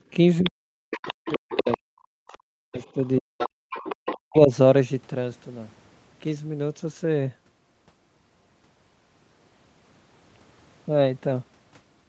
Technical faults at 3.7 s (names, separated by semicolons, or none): other side's voice leaking through; background gated by the echo canceller